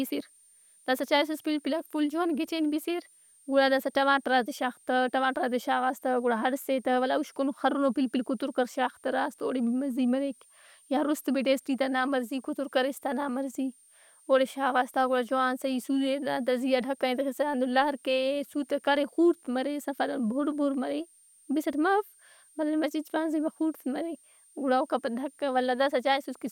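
A switching supply whistle runs under the speech for the whole clip, a thin high tone drifting between 8.8 and 9.1 kHz, about 35 dB below the signal. A switching power supply running in audible burst mode or beating with another one causes it, and a spectrogram shows a faint, wavering horizontal line.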